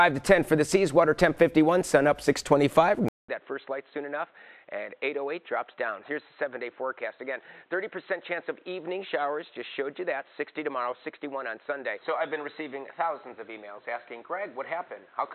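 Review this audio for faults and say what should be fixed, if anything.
After a 200 ms gap at 3.08 s, the sound turns dull and boxy for the rest of the clip, with nothing above 4.1 kHz, roughly 10 dB quieter, and a new, faint noise floor. The likely cause is an input switched to a poorer device. Locking the recording input so it cannot change mid-session would prevent this.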